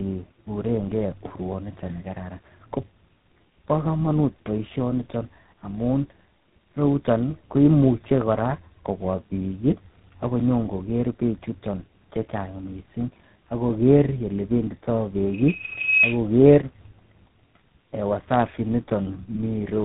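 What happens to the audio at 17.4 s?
At 17.4 s you're hearing tandem speech coding, which runs through the entire clip rather than starting there. The speech sounds like it went through three lossy coders in a row, consistent with two GSM full-rate hops and a final G.726 stage, each one re-encoding the previous one's damage. The result is rough, muffled and warbly speech, with nothing above about 3.8 kHz.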